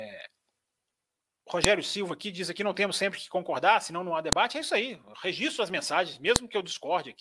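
At 1.64 s a sharp, loud click cuts into the speech, and the same snap returns at 4.33 s, just after "concordar senão não há", and at 6.36 s, after "as mensagens". Each is a file header played as audio. Separate WAV pieces were joined without stripping their headers, so a few dozen header bytes were decoded as samples. On the waveform each shows as a tall, isolated spike of a millisecond or two. On the spectrogram it is a thin vertical line spanning all frequencies.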